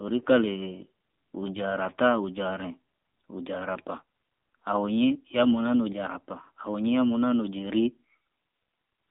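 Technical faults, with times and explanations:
Throughout, AMR narrowband mobile codec: nothing passes above 3.6 kHz or below about 200 Hz, and the speech has a buzzy, synthetic edge from modelling the vocal tract with sparse pulses, which fits a low bitrate near 7.4 kbps. A plain telephone band filter would narrow the sound without adding that artificial buzz.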